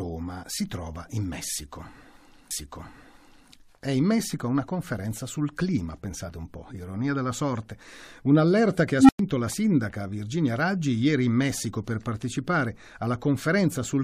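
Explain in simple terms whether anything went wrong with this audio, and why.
Two things went wrong in this speech clip.

The first is a stream segment repeated. The player fetched or lined up the same chunk of the stream twice, so the audio jumps backward. From about 2.50 s to 3.50 s, roughly one second of speech plays a second time, adding about a second to the clip. A small blip marks the point where playback skips back, and then the speech carries on as if nothing happened.

The second is an unstable filter. A filter that feeds its own output back into itself was set up with bad values, so instead of settling it kept amplifying itself. At about 8.96 s a low tone, somewhere around 300 Hz, swells over about 0.13 s until it is far too loud and distorts. The numbers then overflow, and the sound drops out for about 0.1 s before the speech returns at "la sindaca".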